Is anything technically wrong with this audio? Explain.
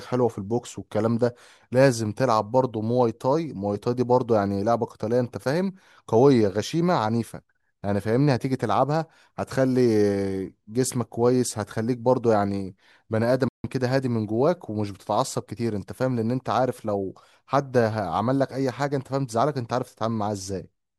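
Yes. A playback stall occurs from 13.48 to 13.64 s. The player likely ran short of buffered data or had its output thread held up, so nothing reached the output for 156 ms. The speech drops abruptly into silence mid-flow, then carries on.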